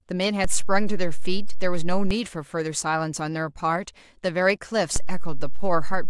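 A DC step shifts the zero line of this speech by about -16 dBFS at 0.44 s and back at 2.11 s, then again at 4.96 s until the end. Each jump and release lands as a low thump, while the speech carries on unchanged.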